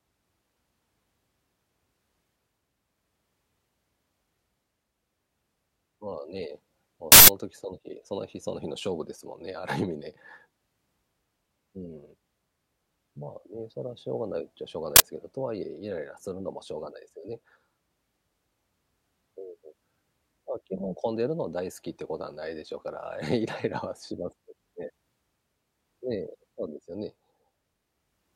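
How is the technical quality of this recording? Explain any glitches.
The recording has two glitches, both from an uninitialised buffer. At 7.12 to 7.28 s (160 ms) and again at 14.96 to 15.0 s (40 ms), the playback system sent out an audio block before any speech had been written into it, so whatever data was left in that memory played as samples. The longer one is heard as an abrupt, loud burst of harsh digital noise, and the shorter one as a loud crack.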